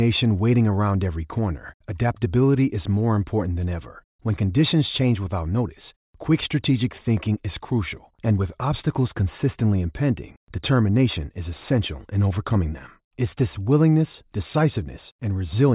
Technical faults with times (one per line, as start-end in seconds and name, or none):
none